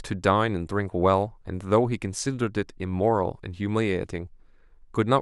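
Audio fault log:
No faults can be heard anywhere in this speech clip. Nothing in the audio calls for an entry in the log.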